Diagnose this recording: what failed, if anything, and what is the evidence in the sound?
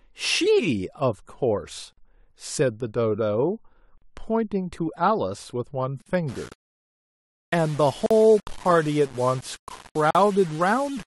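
Two separate problems, both introduced after capture.

At the codec stage, the speech drops out briefly at 1.93 s (about 48 ms), then at 6.02, 8.06 and 10.11 s (about 43 ms each), always on a 2-second grid. That's the signature of a gap at a join of encoded pieces. The audio was encoded in 2-second chunks and spliced back together without trimming each run's start-up delay and final-frame padding. The silences have slightly smeared edges, and the speech resumes exactly where it stopped.

From 6.29 s to the end, the speech turns grainy, with a gritty distortion that moves with the level and gets worse on quiet syllables. That's low bit depth without dither, which points to the sample-format conversion stage. It sounds like rounding down to about 6 bits, which leaves an error floor around 25 dB below the signal. The likely cause is a requantisation to a very short word length with no dither applied, so the error tracks the signal instead of sitting as a steady noise.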